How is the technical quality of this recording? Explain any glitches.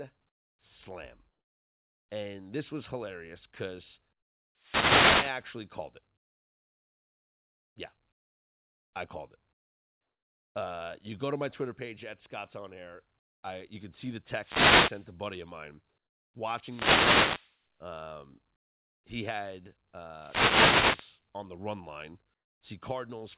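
The recording is speech carried over a narrowband call path with nothing above 4 kHz, consistent with a G.711 telephone codec. Two kinds of fault are audible.

Wireless microphone noise hits occur at 4.55–5.54 s, 14.24–15.20 s, 16.54–17.61 s and 20.11–21.22 s. Each is a roughly one-second swish of static as the FM radio signal fades and receiver noise rises over the speech.

Comfort noise replaces the background from 22.34 to 22.61 s. For 270 ms the quiet room tone, about 54 dB below the loud parts, turns into steady, featureless hiss about 15 dB quieter. This is likely because discontinuous transmission stopped sending audio and the receiver generated synthetic noise in its place.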